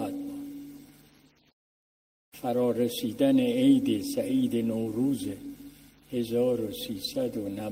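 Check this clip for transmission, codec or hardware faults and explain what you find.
No faults found anywhere in the clip.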